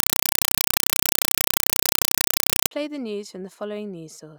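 Compressed stream played as audio runs from 0.00 to 2.71 s, ending just before "the news". The link carries an AC-3 stream that the receiving end treats as plain samples instead of decoding, so each coded frame comes out as a 4 ms blast of noise and then silence, 31.25 times per second. The result is harsh, very loud chattering static in place of the speech, and its pattern fits a 192 kbps AC-3 stream.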